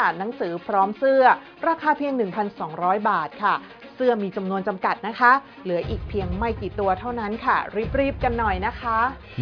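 The signal carries no audible technical faults at any point.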